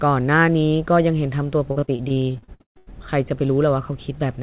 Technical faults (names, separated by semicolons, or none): repeated packet loss (robotic sound)